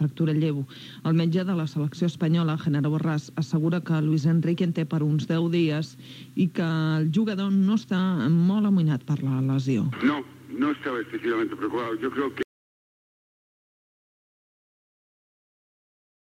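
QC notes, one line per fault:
12.43 s to end: audio dropout to silence. The sound cuts off abruptly and never returns, leaving about 3.8 s of silence with no room tone. The input was likely lost through a disconnection, link failure or mute while recording continued writing silence.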